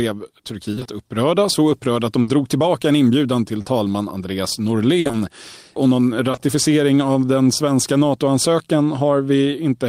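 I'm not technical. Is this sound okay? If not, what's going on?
No. Small chunks of the speech never arrived in time, so the playback had to cover the holes.

From 0.71 to 0.87 s there is repeated packet loss, which gives a robotic sound. Four short pieces, each no longer than 20 ms, went missing in quick succession, and the player patched each one by stretching the sound just before it. About half of that stretch is filled-in sound, so it comes out choppy and mechanical.

A burst of packet loss hits at 2.21 to 2.29 s and again at 4.99 to 5.07 s. Each time a run of about 60 ms dropped out together. The player kept the last sound going and faded it, producing a brief held buzz or fading hiss before the speech jumps ahead with a bit skipped.

Short concealed packet loss occurs at 3.61 to 3.67 s, then at 5.07 to 5.15 s straight after the second burst, and at 6.31 to 6.39 s. These are tiny gaps of 20 to 40 ms, smoothed over by continuing the previous sound. 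Each one comes across as a quick smear or wobble, and a short consonant can vanish.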